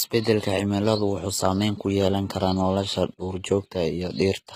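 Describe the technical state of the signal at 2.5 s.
At 2.5 s the speech carries the damage of HE-AAC compression, present throughout the clip. The texture likely comes from HE-AAC. The codec keeps only the lower band and fakes the treble by copying lower bands upward under a coarse envelope. The sound points to a low bitrate near 20 kbps. The top still sounds bright, but it is synthetic. The damage is plainly audible, with gritty, lispy s sounds. Nothing remains above 14.9 kHz.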